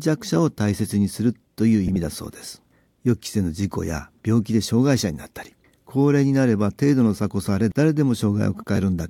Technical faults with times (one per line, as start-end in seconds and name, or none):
1.86-1.96 frames out of order
8.76-8.78 frames out of order